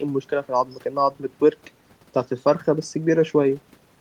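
No technical faults can be heard anywhere in the speech.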